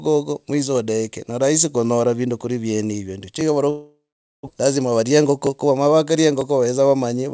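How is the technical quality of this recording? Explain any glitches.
The recording has three audible faults, all after the first two seconds. It passes through a G.722 call path, so nothing is heard above 8 kHz.

Periodic USB or driver dropouts: From 2.41 s, just after "ne rahisi kunyora vindu", to the end, something blocks the audio driver about every 1.0 s. A sliver of sound is skipped each time, leaving a regular tick.

Long network dropout: Between 3.70 and 4.49 s, audio likely stopped arriving over the network. The last sound trails off as a fading buzz, then about 460 ms of silence follows, and about 600 ms of speech is lost.

Jitter buffer speed-up: From 4.77 to 5.86 s, the receiver trims short pitch-period pieces to shed around 150 ms of backlog. The speech plays about 11% faster at unchanged pitch and sounds hurried.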